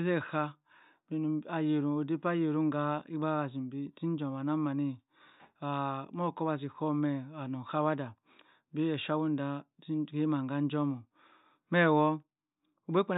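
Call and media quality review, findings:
No audible faults found on the speech path; nothing to log against any component.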